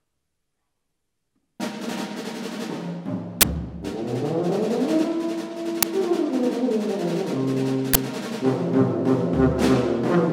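At 3.41 to 3.43 s, 5.83 s and 7.94 to 7.96 s the audio is replaced by loud garbage: the first and last are short bursts of harsh digital noise lasting 20 ms, and the middle one, about 5 ms long, is a loud crack. This is an uninitialised buffer: a block was sent to the output before any audio had been written into it, so leftover memory contents were played as samples. Unlike a dropout's silence, each event is a block of loud garbage.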